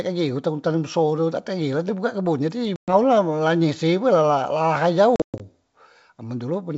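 Speech carried over G.722 wideband coding shows packet loss on an ADPCM call at 2.76 to 2.93 s and 5.16 to 5.41 s. Hard silent holes are followed by slightly distorted speech as the decoder's predictor resynchronises, unlike a clean dropout.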